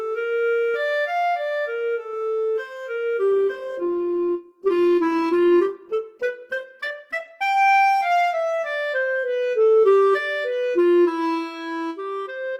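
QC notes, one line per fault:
3.31–7.31 s, adaptive stream at a lower bitrate: codec artefacts suddenly rise with no gap, as the stream dropped to a version that points to roughly 16 kbit/s Opus.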